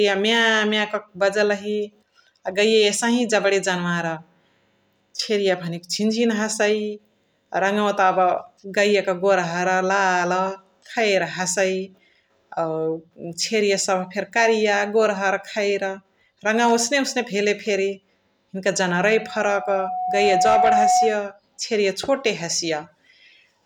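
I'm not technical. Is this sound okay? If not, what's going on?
No. From about 19.0 to 21.3 seconds there's loudspeaker feedback squeal: the mic is hearing its own speaker, and one pitch, around 734 Hz, keeps looping and growing. It swells over roughly a second and a half until it's a steady whistle louder than the speech.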